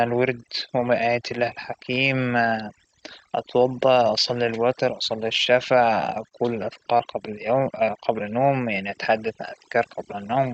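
Overdone noise removal runs through the whole clip. Frequency bands near the noise level are cut hard, leaving near-silent gaps with twinkling specks.

Short concealed packet loss hits at 6.29 to 6.33 s and again at 6.97 to 7.01 s. Each hole fits one lost 20 ms packet. The decoder extended the last sound, causing brief smears.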